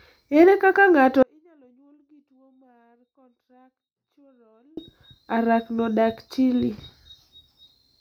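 From 1.23 s to 4.77 s the speech cuts out abruptly, an audio dropout to a faint residue: about 3.5 s holding only a trace roughly 40 dB down, likely a live path that lost its wanted signal. The waveform shows a sharp-edged, near-flat stretch and the spectrogram goes almost dark.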